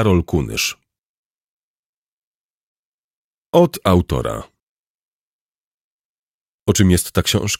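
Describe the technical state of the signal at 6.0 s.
At 6.0 s the signal is intact, with no audible fault at that moment.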